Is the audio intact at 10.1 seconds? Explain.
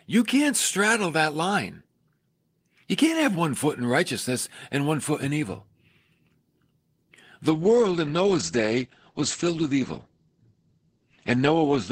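No, there's a call bitrate drop from 7.51 s to the end: the encoder falls from 40 to 10 kbps and cuts the bandwidth to 8 kHz, so it sounds muffled and rough.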